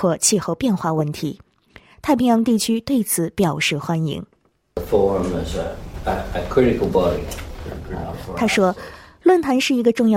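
No technical faults can be heard anywhere in this audio.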